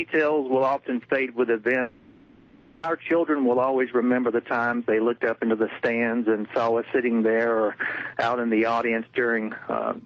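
Gain pumping runs through the whole clip. The gain swings by around 10 dB. Loud and soft parts sit close in level, and the sound feels squashed. This likely comes from gain set far too high, with a fast limiter pulling it back down.

At 1.81 s the audio breaks off until 2.86 s. That whole stretch of about one second is lost. The receiver fills all of it by stretching the last sound into a fading buzz or hiss, with no silence. The audio resumes later, minus the missing part. The likely cause is a long network dropout, heard through a call codec whose highs stop near 8 kHz.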